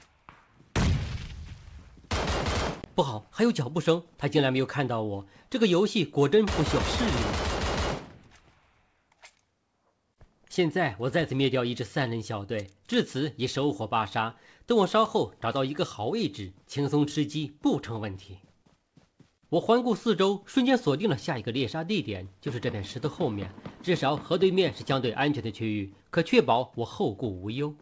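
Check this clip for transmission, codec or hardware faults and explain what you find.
Nothing stood out on listening, and the absence of content above 8 kHz fits the ordinary band limit of a wideband call codec such as G.722 at around 64 kbps rather than any problem.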